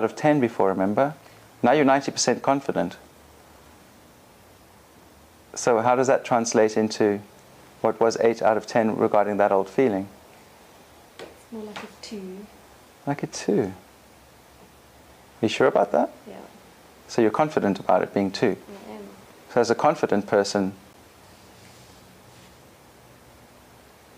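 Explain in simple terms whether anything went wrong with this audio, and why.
At 20.93 s there is a CD skip. A knock or a flaw on the disc made the laser jump to a different turn of the disc's spiral. The player goes silent for about a hundredth of a second, with a small tick, and then carries on from another place in the recording. A simple dropout differs: the sound would come back exactly where it left off. Here it lands at a different spot.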